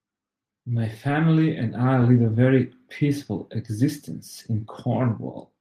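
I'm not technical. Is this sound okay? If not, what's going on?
Not quite. At 1.07 to 1.09 s and 2.01 to 2.03 s, a lost packet was rebuilt from error correction. The backup copy fills each gap but sounds briefly rougher.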